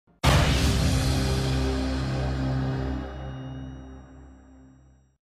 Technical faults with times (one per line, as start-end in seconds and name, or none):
2.83-4.18 zipper noise